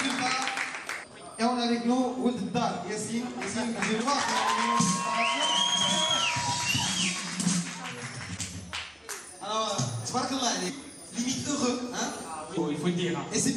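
Damaged data in a compressed stream at 1.02–1.04 s, 4.00–4.02 s, 8.36 s, 10.68 s and 12.56 s: corrupted frames throw the decoder out of sync, each producing a short chirp or blip.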